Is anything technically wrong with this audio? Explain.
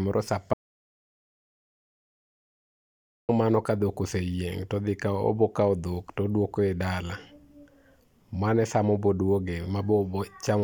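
Yes. An audio dropout to silence runs from 0.53 to 3.29 s. The speech cuts off abruptly and about 2.75 s of dead digital silence follows, with no room tone, before it resumes at "mano ka dhok oseyieng". The likely cause is a lost input, with silence recorded in its place.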